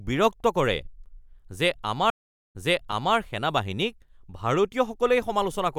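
At 2.10 s there's a stream reconnect: the connection dropped, playback went silent for about 432 ms, and the player restarted a fresh decoder mid-stream. Since the server resent a burst, the audio picks back up 624 ms earlier, so you hear a stretch repeated before things settle by 3.16 s.

At 2.92 s, inside that reconnect, there's an underrun with held sample. The output buffer ran dry and the converter froze on its last value for 5.8 ms, a 256-sample gap. The sound flattens out, and a few milliseconds of live audio went missing.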